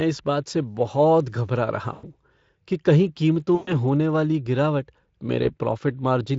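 At 1.93 to 2.04 s, 3.55 to 3.73 s and 5.43 to 5.55 s, VoIP packet loss concealed by the Speex speech codec stretches the last sound into a fading buzzy tone or coloured noise, then leaves it weak. The gaps fit roughly 100, 120 and 20 ms of lost audio.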